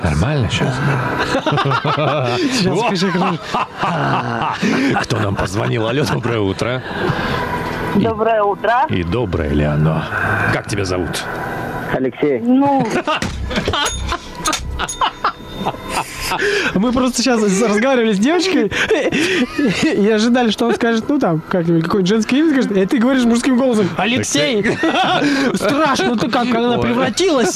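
Gain pumping runs throughout the clip. The input gain was likely set far too high, so a fast limiter clamps down on every loud sound. The gain swings around 15 dB, leaving the sound squashed.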